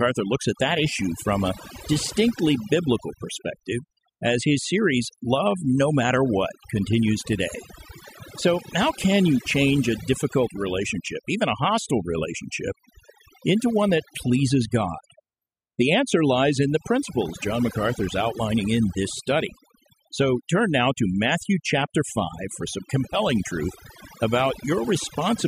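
Overdone noise removal runs through the whole speech clip. A noise reduction stage set far too aggressively pulls individual frequency bands down or out wherever they sit near its noise estimate, taking the quieter parts of the voice with them. The background falls to near silence dotted with twinkling specks.

GSM phone buzz appears from 10.33 s to 12.00 s. A nearby 2G phone bursting 217 times a second has its radio pulses rectified by the audio circuitry, producing a hard, raspy 217 Hz buzz rich in harmonics, about 28 dB below the speech and unrelated to it. It holds steady, which fits a phone on a call.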